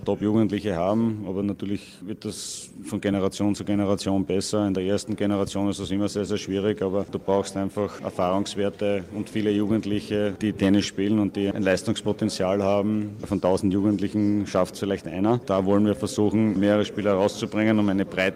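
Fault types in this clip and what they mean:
No audible faults present.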